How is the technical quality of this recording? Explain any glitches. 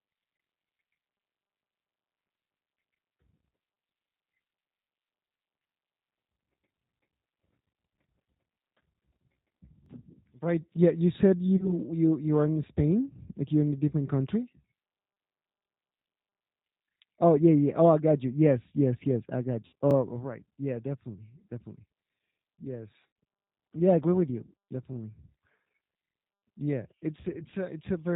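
The recording is compromised by plainly audible low-bitrate coding throughout, plus two kinds of brief glitch: stutters at the chunk joins and three dropouts that the codec papered over.

G.729 codec, throughout: the whole clip has passed through this 8 kbit/s VoIP codec, and the damage is plainly audible. Rather than storing the waveform, the codec sends a vocal tract filter shape, a pitch estimate and a handful of pulses per 10 ms frame, and the decoder rebuilds speech from those. Everything above 4 kHz is gone, so the speech sounds dull and boxy, with a rough, slightly synthetic texture.

Overlapping chunks, at 4.84–4.86 s, 9.86–9.89 s, 19.91–19.93 s and 24.93–24.96 s: the audio was handled in 5-second blocks, and each block began about 23 ms before the previous one finished. That sliver of sound therefore plays twice at every join. Each repeat is heard as a small click or hiccup, and the regular 5-second spacing gives the problem away.

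VoIP packet loss concealed by the speech codec, at 11.57–11.73 s, 19.66–19.74 s and 23.07–23.16 s: audio went missing, about 30 ms just before "you you are in", 60 ms right after "yes yes I", and 90 ms in the third gap. That pattern fits one, two and three lost 30 ms packets. The decoder filled each hole by extending the last pitch and filter with falling gain, producing a short buzzy, fading smear. At 11.57 s, the recovery drags on past the lost stretch itself.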